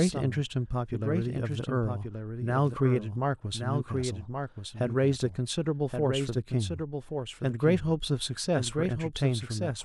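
From start to finish, every stretch of speech comes back a second time roughly one second later, a little quieter than the original, perhaps around 5 dB down, and overlapping whatever follows. The repeat is a clean, full-band duplicate with no reverberant tail or room colouring, so it reads as a second track rather than an echo. This doubled audio track is likely the same signal mixed in twice, once through a slower capture path.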